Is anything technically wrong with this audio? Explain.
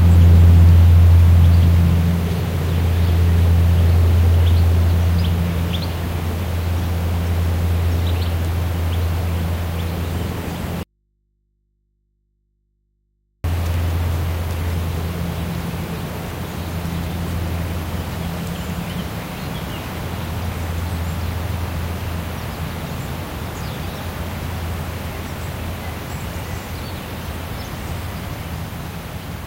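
Yes. From 10.83 s to 13.44 s there is an audio dropout to a faint residue, lasting about 2.6 s. The sound cuts off abruptly in mid-flow, and only a low mains hum remains, about 50 dB below the normal level, until the sound returns just as suddenly. The likely cause is a break upstream while the input stayed live and picked up hum. The waveform collapses to a thin band with square edges. The spectrogram goes nearly blank apart from faint horizontal hum lines.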